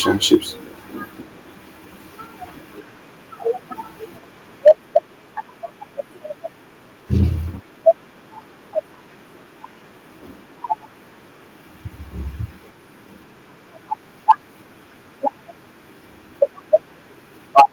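At 0.33 to 0.35 s the speech peaks flatten with a harsh, crackling edge. This is microphone overload, likely from input gain set high enough that the converter ran out of headroom, about 2 dB over full scale, with a sizeable share of the samples in that burst cut off. At 0.35 s the whole signal drops by about 2 dB in a single step. This is the microphone volume stepped down, likely the call software reacting to the clipped peak by lowering the device input level.

The same sequence repeats around 4.67 to 4.97 s. A longer overload runs about 3 dB over, though only a small fraction of samples are clipped. It is followed at 4.68 s by a step down of about 3 dB, likely the same automatic gain cut.

Brief overloads of about 2 dB follow at 7.20 to 7.23 s and 14.30 to 14.32 s, each with a noticeable portion of samples flattened, and each likely caused by the input gain still being too hot.

The worst overload comes at 17.57 to 17.62 s. 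It is about 11 dB over, with heavy clipping across a large share of the burst, and is likely caused by a peak far exceeding the converter's range. At 17.6 s the level drops by about 3 dB, likely another automatic step down.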